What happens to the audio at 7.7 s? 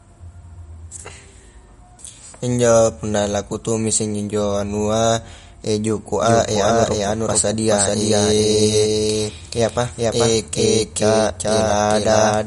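At 7.7 s, the speech is heard twice. A second full-band copy runs about 0.4 s behind the first and at about the same level. It has no decay or room colour. It began abruptly at 6.23 s and lasts to the end. This is likely a doubled audio track, from a slower second capture path or an edit holding two copies out of step.

Codec damage is also plainly audible there, as across the whole clip. Nothing is present above 11.2 kHz. Weak frequency detail switches on and off between frames, giving a watery, swirly texture and smeared attacks. This is likely MP3 compression, and it fits a bitrate around 49 kbps.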